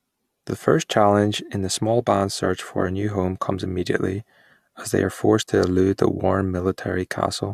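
Nothing in this speech recording stood out as a technical problem on listening.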